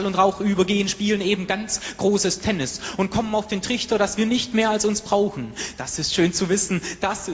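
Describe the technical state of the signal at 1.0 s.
At 1.0 s the signal is intact, with no audible fault at that moment.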